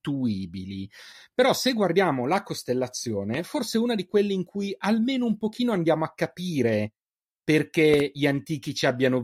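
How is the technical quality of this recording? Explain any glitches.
The recording has two glitches, both loud pops. At 3.34 to 3.37 s one loud pop, and at 7.94 to 8.02 s two in quick succession, each roughly ten decibels above the speech. A sudden voltage pulse, likely from a plug, switch or static, was added to the signal. Unlike a dropout, the speech continues underneath the thump.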